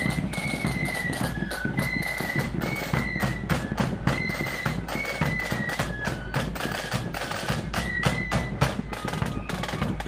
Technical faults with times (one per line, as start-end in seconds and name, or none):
none